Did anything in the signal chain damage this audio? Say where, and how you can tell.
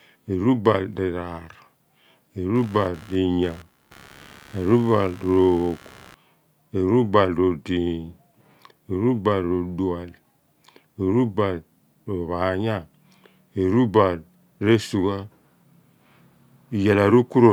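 Yes. Computer activity noise runs from 2.55 to 6.14 s: a buzzing chatter pulsing around 70 times a second, roughly 25 dB below the speech. It comes from the analogue wiring, where changing processor or peripheral load shifts the shared ground, so the noise follows the computer's activity rather than the speech.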